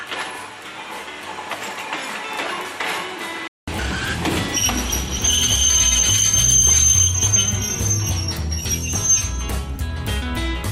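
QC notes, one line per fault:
0.00–3.68 s, input switched to a poorer device: likely a different input in use; sound is quieter, noisier, capped near 13 kHz, then 200 ms silence before fuller sound returns.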